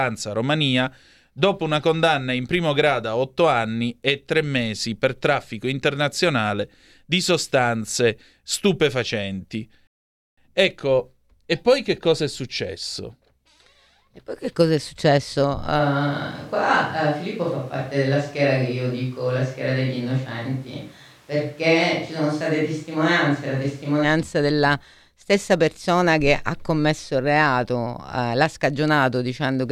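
At 9.87 s the speech drops to silence until 10.38 s, then resumes exactly where it stopped. This rebuffering stall adds half a second.

From 15.81 to 24.03 s the speech turns roomy and hollow, with thinner bass and background noise about 30 dB below it. This is likely a switch to a distant microphone.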